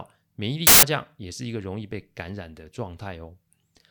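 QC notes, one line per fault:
0.67–0.83 s, samples built from the wrong bytes: for about 0.16 s the speech gives way to a burst of loud, harsh broadband noise, because each sample's bytes were assembled wrongly, so the rapidly varying low-order bits land in the most significant position. On a waveform the envelope jumps sharply with no speech shape. On a spectrogram it is a broadband block, sharply bounded in time.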